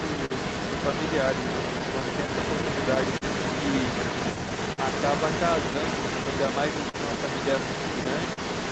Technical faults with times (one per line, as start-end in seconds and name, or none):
0.00-8.71 clock drift between sender and receiver
0.00-8.71 echo leak
0.25-0.32 short stall from a late packet
1.44-3.23 scattered short gaps
4.72-4.80 short stall from a late packet
6.24-6.96 repeated stalls (stutter)
8.33-8.39 short stall from a late packet